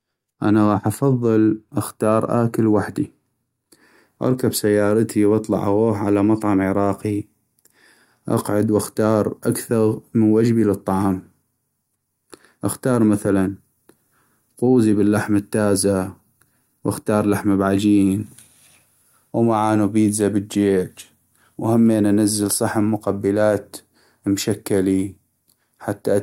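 No technical faults can be heard anywhere in this recording.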